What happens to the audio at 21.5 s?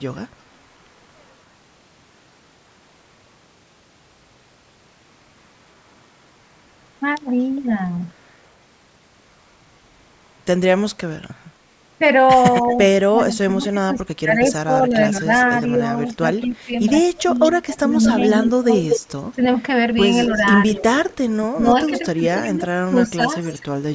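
At 21.5 s two faults overlap. The first is speech suppressed in double talk, running from 20.26 to 23.63 s. The level dips and breaks into pieces, about 15 dB down at its deepest, adding up to around 0.7 s of affected sound. The likely cause is an echo canceller facing both sides at once and turning everything down. On a waveform the envelope shows sudden notches. A spectrogram shows gaps and a thinned upper band.

The second is echo leak, from 20.31 s to the end of the clip. A faint delayed copy trails the sound by 231 ms, about 20 dB below it. That is likely the residue a loudspeaker-side echo canceller failed to remove and sent back. A spectrogram shows weak repeated harmonic traces shifted right by that delay. On the waveform, low-level energy fills the spaces between louder bursts.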